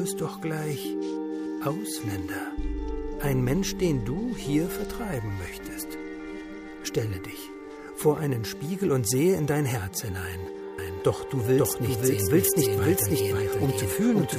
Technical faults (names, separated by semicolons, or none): doubled audio track